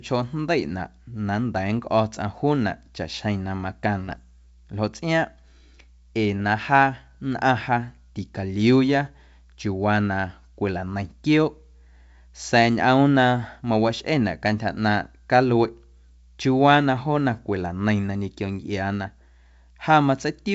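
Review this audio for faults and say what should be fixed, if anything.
Bit errors on an ADPCM link show up from 4.05 to 4.20 s: flipped bits knock the decoder's step size and predictor off, giving a rough popping burst on this G.722 path. Add error protection or concealment on the link so corrupted frames get caught.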